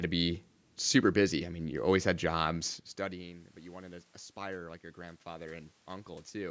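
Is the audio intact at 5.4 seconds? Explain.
No. Automatic gain rising runs from 3.09 to 6.46 s, just after "you always had jobs". The input dropped by about 19 dB, so the gain control slowly raised its gain by about 6 dB, and the voice and room noise swell together.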